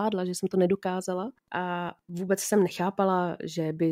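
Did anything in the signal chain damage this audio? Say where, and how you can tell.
Yes, in the analogue wiring. Faint Wi-Fi interference ticks throughout, every 102.4 ms, about ten times a second. The circuit rectifies a nearby radio's beacons.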